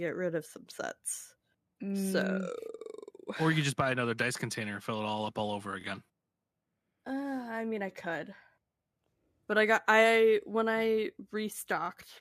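A brief stutter, like a tiny catch in the speech, occurs at 2.79–2.81 s, 5.81–5.84 s and 11.86–11.88 s. These are overlapping chunks: the audio was handled in 3.0 s blocks, and each new block began slightly before the previous one ended, so about 23 ms of sound plays twice at each join. That duplicated sliver breaks the flow of the speech, producing the click-like hiccup at these joins.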